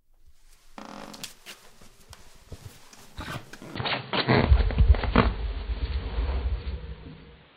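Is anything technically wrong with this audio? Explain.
Yes. From 3.76 s to the end, the sound turns dull, with nothing above 4.5 kHz, faint new background noise and no gap. This is likely an input switched to a poorer device. The spectrogram shows a flat ceiling, and the waveform steps in level by roughly 5 dB.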